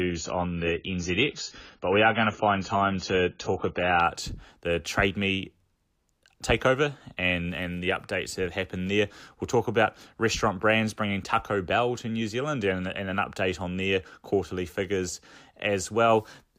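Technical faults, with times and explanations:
0.0 to 4.0 s, adaptive stream starting at a low bitrate: for the first four seconds the speech is dull, with nothing above 7 kHz, and the codec artefacts are stronger. Then it jumps cleanly to a brighter sound with no gap. That's the player opening on a cheap rendition so playback starts fast, then switching up once it has gauged the connection. The early stretch sounds like AAC at around 16 kbit/s, and the later one fits roughly 96 kbit/s.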